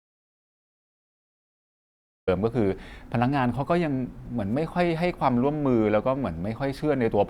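From the very start until 2.28 s the speech is replaced by dead digital silence, an audio dropout to silence, likely from lost input while recording continued. Unlike a natural pause or gated quiet, no room tone or hiss remains, and the speech then enters abruptly.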